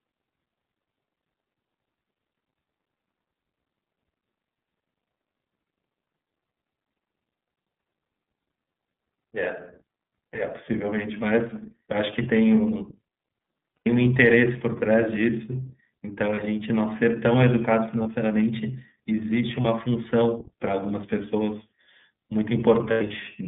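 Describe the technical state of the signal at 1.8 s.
At 1.8 s you're hearing the iLBC codec, and it's there for the whole clip, not just that moment. The band stops around 3.6 kHz with little below 150 Hz, so the speech sounds boxed-in and telephone-like. Each 30 ms block is coded on its own, which fits the 13.33 kbps mode, and that leaves a plainly audible rough, slightly synthetic edge on the speech.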